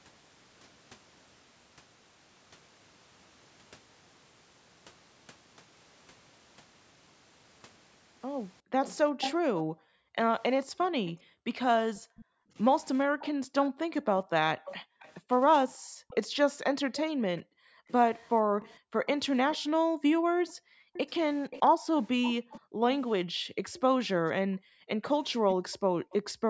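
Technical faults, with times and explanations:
8.61 s to the end: background gated by the echo canceller. From here on, the room tone behind the speech repeatedly sinks and returns, dropping by as much as about 40 dB, for roughly seven seconds in all. Each time the far side plays through the loudspeaker, the canceller clamps the microphone down, taking the ambience with it, then releases. On a spectrogram the faint background floor vanishes in blocks and reappears. The waveform shows the noise floor collapsing to near silence between those blocks.
8.85–9.6 s, 11.06–12.25 s, 13.19–13.29 s, 14.65–15.13 s, 16.08–22.6 s, 23.76–23.8 s and 25.08–26.32 s: echo leak. A delayed, ghostly copy of the speech trails the original by 424 ms at first, and the gap stretches steadily to 510 ms by the last one. It is about 5 dB under the speech at its loudest and about 25 dB under at its faintest. The likely cause is a loudspeaker on one end whose echo canceller let part of its own playback back into the microphone. 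A spectrogram shows faint duplicate harmonic patterns shifted right by about half a second.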